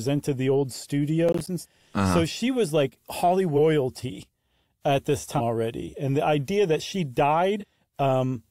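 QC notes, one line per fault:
1.29–1.47 s, processor overload crackle: just after "the old", a gritty tearing burst as roughly seven 10 ms buffers miss their deadlines and drop to hard-edged silence.
1.60–1.65 s, 3.55–3.58 s, 7.60–7.64 s, compressed frames skipped: the first two jump ahead about 400 ms, the second just after "she was like", and the last about 200 ms. Each skip is whole 46.4 ms frames.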